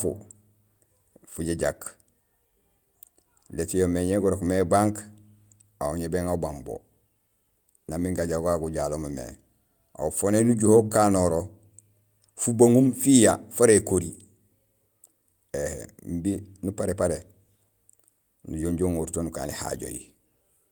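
A speech recording with no technical faults to report. Nothing in it calls for a time stamp or a cause.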